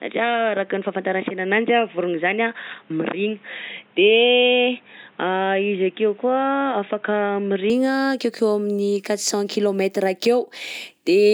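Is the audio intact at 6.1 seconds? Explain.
No. At 6.1 s the speech sounds dull and boxy, with nothing above 3.8 kHz and a faint new noise floor well below it. This lasts from the start to 7.7 s, then clears with no gap or level jump, likely from the input switched to a poorer device.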